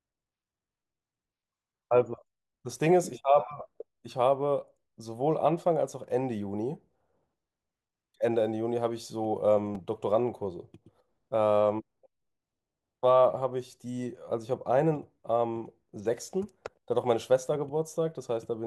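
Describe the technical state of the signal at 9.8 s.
A brief click or buzz interrupts the speech at about 9.75 s, just before 9.8 s. This is a repeated buffer: new audio arrived late, so a 5 ms buffer played twice more with hard joins, replacing about 10 ms of speech.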